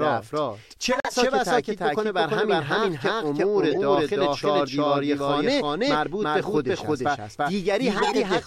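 The speech runs throughout with a second full-band copy about as loud as the original, trailing it by roughly a third of a second. This doubled audio track is likely caused by the signal being captured twice along paths of different speed, or by an edit that left two copies out of step. It differs from room echo or reverb: the trailing copy carries no decay or room colour and is not quieter, so every syllable simply arrives twice. From 0.92 to 1.14 s the sound drops abruptly into silence for about 0.22 s, a corrupt frame muted. Damaged compressed frames were rejected by the decoder and replaced with nothing, and the length of the hole fits several consecutive frames lost together. Unlike a decoded error, nothing is added in the gap; the audio just disappears and then resumes on time. The opposite problem, a corrupt frame decoded, appears twice. From 3.70 to 3.76 s a short error peaks at about −15 dBFS, matching a single bad frame. 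From 7.97 to 8.16 s a longer error peaks at about −10 dBFS, long enough for several frames. In both cases the decoder played frames with flipped bits, so misread gains and codes put energy at the wrong frequencies. The result is an added burst of garbled sound lasting about as long as the damaged frames.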